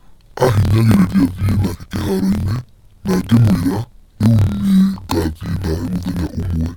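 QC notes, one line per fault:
throughout: interleaved audio read as planar. Each 26.12 ms block of alternating left/right samples is split into halves taken as left and right, each playing at half speed. Speech drops an octave, sounding doubled and choppy, chopped at 38.3 Hz.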